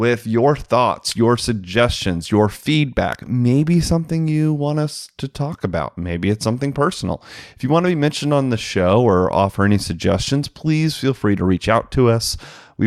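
Nothing wrong turns up anywhere in this bit of speech; there's simply no technical fault to point to.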